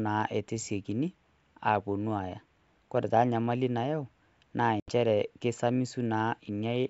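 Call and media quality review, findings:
Packet loss on the ADPCM call, 4.80–4.91 s: hard-edged silent hole of 80 ms, roughly four packets. Probable component is the G.722 decoder, whose adaptive predictor and step size fall out of step with the sender. Speech returns with brief, slight distortion, then re-converges.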